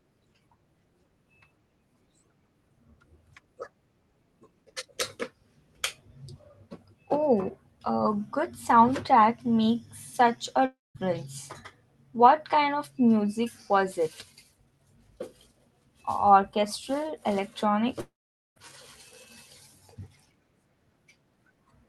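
A speech recording with a likely long network dropout at 10.65–10.97 s and 18.01–18.58 s: packets stopped arriving, so the receiver stretched the last sound into a fading buzz or hiss, then silence (about 0.2 s and 0.47 s), before speech resumed with those stretches lost.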